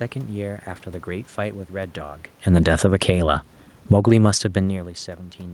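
The automatic gain control in this speech recording keeps re-steering itself. It shows automatic gain falling twice: from 2.43 to 3.14 s it pulls the level down by about 9 dB, and from 3.76 to 4.19 s by about 11 dB. Each time it has judged the input too loud, or its background noise too strong, so the voice and the room noise sink together rather than the voice alone fading. The talker shifting around 2.0 s and again near 4.5 s may be what provokes these corrections. Overlapping those dips there is automatic gain rising from 3.05 to 4.73 s, adding about 5 dB. Here the control has decided the signal is now too quiet and slowly lifts it back, so the voice swells over more than a second and the background noise swells with it. Because this rise overlaps the second drop, the level pumps down, up and down again within about two seconds.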